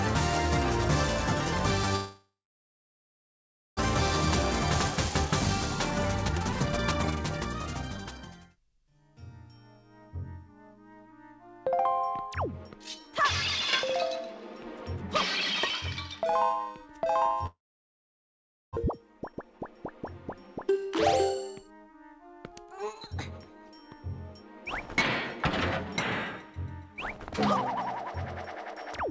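From 1.96 to 3.81 s a long network dropout is the likely cause: the sound smears into a fading buzz, then about 1.4 s of near-silence, and roughly a second of audio never returns. Unlike brief packet-loss concealment, this gap is long enough that the fill fades out, and the playback resumes later in the material. The same thing likely happens again from 17.46 to 18.79 s, with about 1.15 s of silence.

From 5.91 to 8.25 s a jitter buffer speed-up plays the audio at 132% pace, dropping around 0.7 s in small pitch-period slices. Pitch stays put, which separates it from a sped-up playback rate; only the timing feels rushed. Shorter bursts follow at 19.32 to 19.60 s (142%) and 21.34 to 23.16 s (105%). Throughout, nothing is heard above 8 kHz, which fits a G.722 call codec at 64 kbps.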